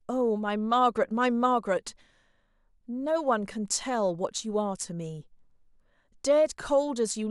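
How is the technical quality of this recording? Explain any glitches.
No technical glitches can be heard anywhere in this speech recording. There is nothing in it that calls for an explanation.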